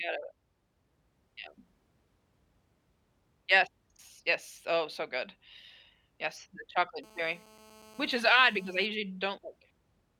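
From 7.04 s to 8.86 s a hard, raspy buzz sits under the speech, steady throughout and about 26 dB below it, pitched near 217 Hz with a dense stack of harmonics and no connection to what is being said. This is GSM phone buzz: a nearby 2G handset in a call transmits radio bursts about 217 times a second, and the audio circuitry rectifies those pulses into an audible rasp.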